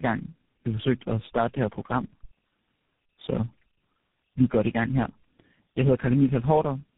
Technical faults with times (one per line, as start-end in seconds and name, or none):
0.00-6.97 tandem speech coding